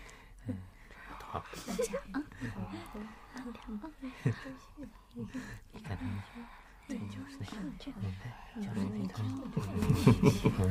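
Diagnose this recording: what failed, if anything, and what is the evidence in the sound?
A sudden gain jump occurs at 9.82 s: the sound and its background noise step up together by about 9 dB and stay there to the end. The likely cause is a digital gain change applied from one sample to the next without a ramp, such as a level setting or bit shift in processing.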